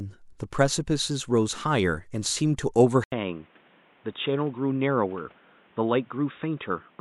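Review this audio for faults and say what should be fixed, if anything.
At 3.04 s the speech stops for 80 ms. When it returns, nothing is left above 3.8 kHz. The voice sounds dull and boxy, and it drops by about 5 dB. A new noise floor appears, roughly 30 dB under the speech. The change lasts to the end of the clip. The likely cause is that the input switched to a poorer device, such as a headset's call profile, which passes only a narrow band and brings its own noise. To prevent this, lock the recording input to one device and turn off automatic device switching.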